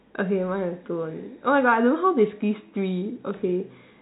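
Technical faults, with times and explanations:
0.94–3.81 s, loudspeaker feedback squeal: the microphone re-amplifies its own loudspeaker at 4.2 kHz, so a tone swells over about two seconds to roughly 5 dB above the speech.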